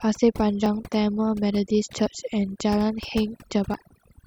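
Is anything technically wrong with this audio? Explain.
Yes, there are two problems. The whole clip has overdone noise removal. The denoiser was pushed far too hard, so it has been pulling individual frequency bands down or switching them off whenever they sat near its noise estimate. The background has dropped, with little twinkling specks in it, and the quieter parts of the voice got caught too.

There are also three short skips, at 0.66 s, 2.06 s and 3.74 s, each heard as the sound jumping forward rather than pausing. The likely cause is a dropped buffer (overrun): the software didn't read its samples before the hardware wrote over them, so that chunk vanished and the two sides were joined straight together. The first two lose around 20 ms each, and the one at 3.74 s loses around 40 ms.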